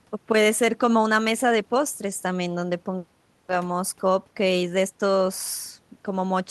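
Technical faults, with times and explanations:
No technical faults can be heard anywhere in this speech recording, and the signal stays steady and continuous throughout.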